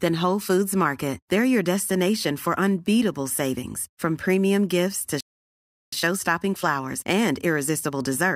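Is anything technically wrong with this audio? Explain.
Yes, there are two related faults. From 5.21 to 5.93 s there is a playback stall: the speech halts mid-flow for about 0.72 s, likely because the player ran out of buffered data or its thread was blocked. Unlike a brief dropout, the silence is long and distinct.

From 5.93 s to the end, time-compressed catch-up follows: the player trims its backlog by removing small slices and cross-fading the joins, so the speech runs about 1.1 times faster. The pitch stays normal, which distinguishes it from a simple speed-up.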